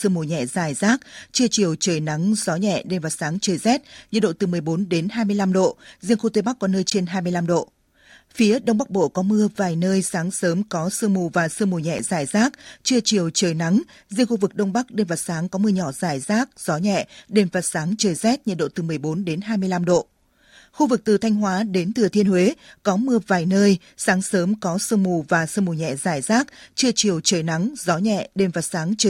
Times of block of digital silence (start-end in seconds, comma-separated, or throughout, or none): 6.90, 11.99